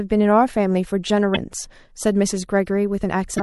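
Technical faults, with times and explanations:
Throughout: MP3 compression. The speech sounds watery and swirly, with dulled treble and smeared consonant attacks. This is likely lossy MP3 encoding at a low rate, roughly what 64 kbps would give, where the encoder trims the highs and drops weak frequency components that flicker between frames.
3.36 to 3.40 s: damaged data in a compressed stream. A brief glitch lasting about 40 ms appears near the end. Corrupted bytes in the stream made the decoder misread frames there, lose sync and jump to the next valid frame header.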